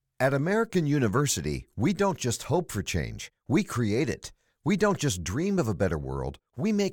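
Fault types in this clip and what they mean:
No technical faults can be heard anywhere in this speech recording. There is nothing in the signal to list under any fault type.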